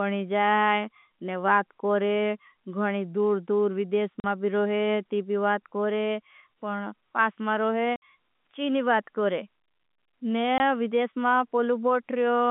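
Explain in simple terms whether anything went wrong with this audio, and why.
Packet loss filled with silence causes short dropouts at 4.2 s (after "घणी दूर दूर विदेश", before "मा भी रोहे ती"), 7.96 s (before "ची नी") and 10.58 s. The missing pieces, about 40, 60 and 20 ms, fit lost 20 ms packets replaced by silence. The line's narrow telephone sound comes from G.711 telephone coding, which is working as it should.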